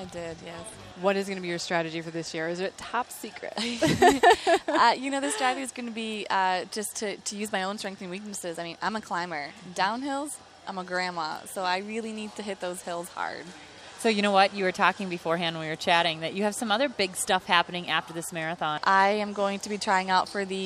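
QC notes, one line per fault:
Nothing stood out on listening, and no problems were noted anywhere in the audio.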